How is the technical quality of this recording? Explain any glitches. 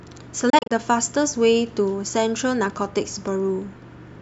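The speech has one glitch. A Bluetooth dropout between 0.50 and 0.71 s is the likely cause: late wireless packets never reached the headphones, so the output fell silent in several short, abrupt gaps, the longest about 29 ms. The speech resumes each time as though it had kept playing.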